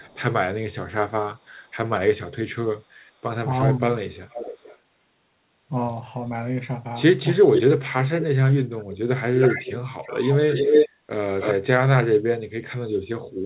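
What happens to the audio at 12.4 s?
At 12.4 s the speech carries on intact, keeping only the normal band limit of the call path, with nothing above 4 kHz.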